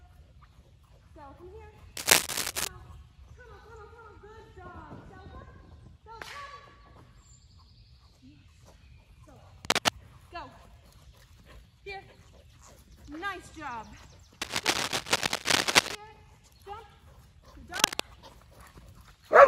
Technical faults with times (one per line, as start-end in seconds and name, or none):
1.97-2.68 cable scratch noise
9.65-9.94 cable scratch noise
14.41-15.95 cable scratch noise
17.74-18.02 cable scratch noise